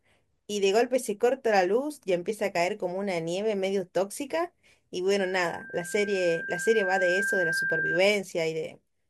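Loudspeaker feedback squeal runs from 5.19 to 8.00 s in this speech clip. A 1.6 kHz tone swells over roughly two seconds to about the speech's own level, as microphone and loudspeaker loop gain exceeds one there.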